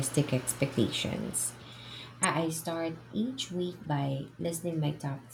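A sharp, loud blip cuts through the speech at 2.23 s, peaking around -15 dBFS, and a second, much fainter chirp near -35 dBFS follows from 3.84 to 3.86 s, just after "start each week". Both are corrupt frames that were decoded anyway. Flipped bits in the compressed data made the decoder misread gains and codes, so energy landed at the wrong frequencies for the span of what sounds like a couple of frames each time.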